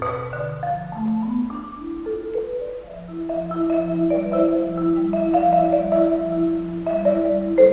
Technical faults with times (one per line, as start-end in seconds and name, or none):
2.38-3.33 scattered short gaps
4.54-5.04 jitter buffer slow-down
7.21-7.71 jitter buffer speed-up